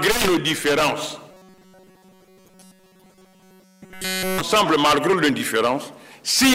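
Incoming audio likely stopped arriving fast enough from 1.31 to 4.40 s, so the playback repeated a buffer of roughly 5.3 ms and essentially all of the real signal was skipped. The result is robotic sound from repeated short buffers, a rigid metallic buzz at 188 Hz.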